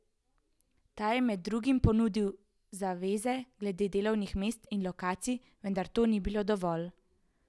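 No technical faults occur at any point in the recording.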